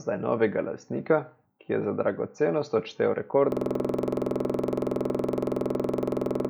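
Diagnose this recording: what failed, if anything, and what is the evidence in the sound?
A system hang loop at the driver or buffer stage: from 3.52 s, after "je za dragocenost odštel", one 46.44 ms slice repeats identically to the end, a 21.5 Hz stutter that fits a 2048-sample ring buffer replaying while the system froze. Unlike echo, nothing decays.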